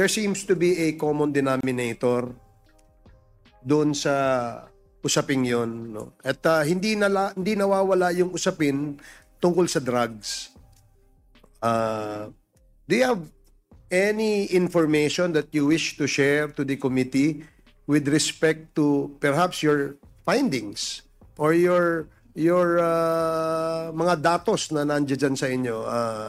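From 1.61 to 1.63 s there is a gap at a join of encoded pieces. Separately encoded pieces were butted together untrimmed, leaving encoder delay and final-frame padding in place. The result is a brief silence of about 28 ms. Its edges are smeared. The sound then resumes where it stopped.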